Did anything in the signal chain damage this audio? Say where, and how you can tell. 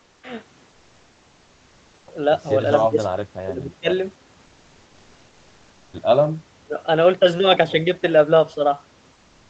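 Yes, at the call-processing and codec stage. From 0.03 to 0.23 s there is comfort noise in place of the background: the real room noise gives way to a steady, featureless hiss about 3 dB quieter. This is likely discontinuous transmission, fitting Opus DTX, with the receiver synthesising the fill. On a spectrogram, that stretch appears as a smooth, uniform band with no fine texture.

Speech suppressed in double talk occurs from 3.4 to 3.89 s and from 6.64 to 6.79 s. The level falls by roughly 30 dB, showing as sudden notches in the waveform envelope and faded harmonics on the spectrogram. The likely cause is the echo canceller turning down the near talker while the far side also spoke.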